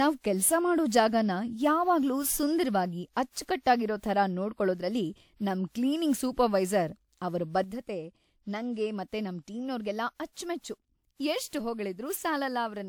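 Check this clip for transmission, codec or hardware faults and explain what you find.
The speech carries two faults: cumulative codec damage throughout, and an abrupt level drop late in the clip.

Generation loss runs through the whole recording. The speech sounds swirly, hollow and smeared, with softened consonant attacks, though the band still reaches 20 kHz. That is more damage than a single encode at 128 kbit/s would cause, which fits WMA re-encoding being the likely cause, around four passes. Each pass quantises on a shifted frame grid, so the noise and spectral holes pile up.

A sudden gain jump occurs at 7.64 s and lasts to the end. The level falls by about 6 dB in one step, and the background noise drops with the speech. A fade or compressor would ramp or recover, so this looks like a digital gain change applied without smoothing.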